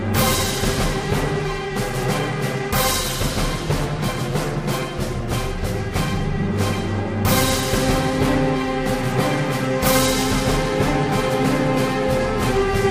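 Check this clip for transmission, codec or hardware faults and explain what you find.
No faults turn up in this clip.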